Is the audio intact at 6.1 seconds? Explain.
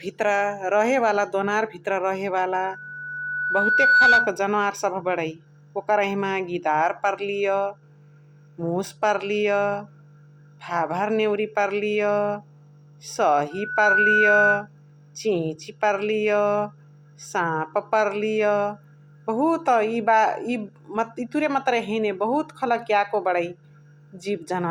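Yes, the speech at 6.1 seconds is intact, with no dropout, click, distortion or other fault at that moment.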